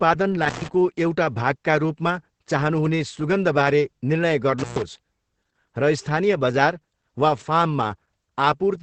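Throughout the speech, Opus voice compression in its SILK linear-prediction mode is running at a very low rate, which fits roughly 10 kbps. Nothing reaches above 8.5 kHz, and the coarsely coded excitation leaves the voice muffled, hoarse and faintly robotic.

From 0.42 to 0.68 s, and again from 4.59 to 4.82 s, an intermittent contact in a loose cable or plug breaks the signal path for about 0.13 s and then 0.12 s. The speech drops out with a crackle at each edge, and a faint hiss fills each gap.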